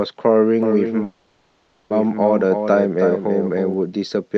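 From 0.63 to 3.74 s, a dry copy about 5 dB quieter trails the speech by about 0.3 s. This doubled audio track likely comes from capture through a second, slower path.

At 1.03 s, the sound stalls into a fading buzz for 0.87 s, then resumes intact. This call audio freeze likely comes from delayed packets emptying the jitter buffer.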